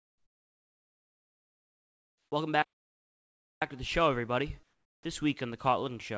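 From the start to 2.32 s the background is a flat, featureless hiss, about 16 dB quieter than the real room sound that follows. This is comfort noise in place of the background, likely from discontinuous transmission, where the receiver synthesises noise while the sender stays silent.

At 5.03 s, after "to the show everybody" and before "week on the", speech begins abruptly without its soft attack, with 20 ms missing. This is an onset clipped by the voice detector, which was likely late to notice sound resuming, so comfort noise filled that gap. Throughout, the G.722 call path leaves nothing above 8 kHz.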